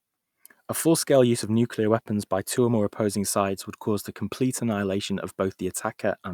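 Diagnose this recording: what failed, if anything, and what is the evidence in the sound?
Nothing in the recording points to a failure at any stage of the chain. The speech runs without any audible event that would call for a diagnosis.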